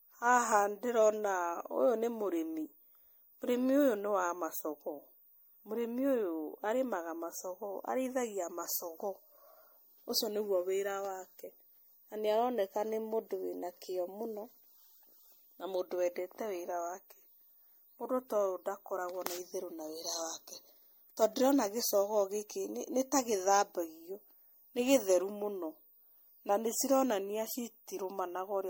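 It's a speech recording with generation loss all the way through: swirly, smeared and hollow, nothing above 16.7 kHz, likely from around four MP3 passes near 62 kbit/s.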